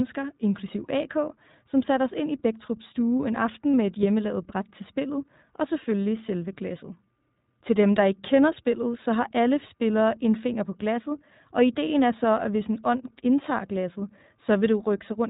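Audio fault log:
throughout iLBC codec: the speech sounds band-limited, slightly rough and synthetic, because this narrowband codec removes everything above 4 kHz and codes each 20 ms frame independently, which fits roughly 15 kbps.
3.73 s lost iLBC frames: after "stue en" a brief held, slightly buzzy vowel replaces one lost 20 ms frame as the decoder repeats the last pitch cycle, then recovers at "med et hjemmelavet bræt".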